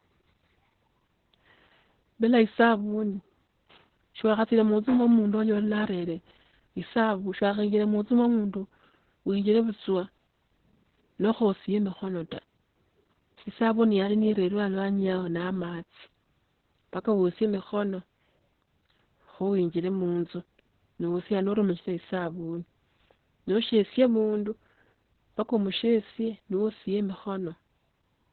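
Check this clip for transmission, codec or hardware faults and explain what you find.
The speech has one codec fault running through it. Opus voice compression from start to finish: the SILK coder's narrowband mode cuts everything above 4.3 kHz and coarsely codes excitation, leaving speech muffled, hoarse and slightly robotic, consistent with roughly 8 kbps.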